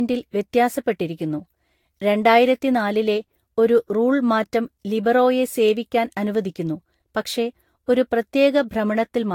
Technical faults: generation loss

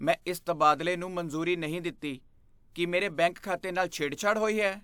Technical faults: none

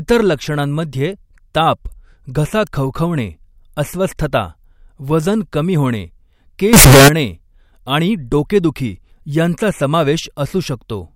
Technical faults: float read as integer

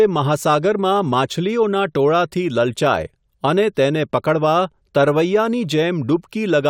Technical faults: none

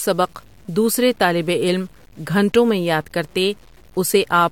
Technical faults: low bit depth without dither

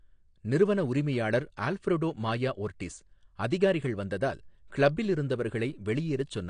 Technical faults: AAC compression

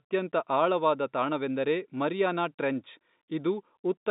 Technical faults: none

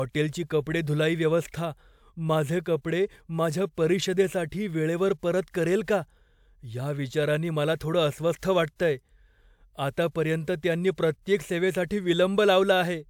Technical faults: none

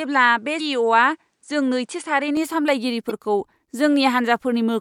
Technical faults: input switched to a poorer device; damaged data in a compressed stream

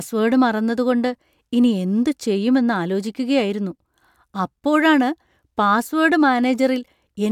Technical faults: none

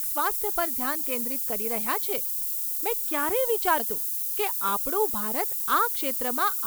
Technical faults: low bit depth with noise shaping; damaged data in a compressed stream

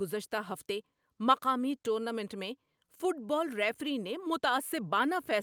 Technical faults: none

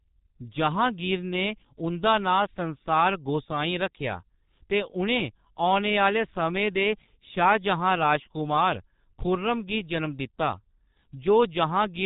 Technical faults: G.723.1 codec

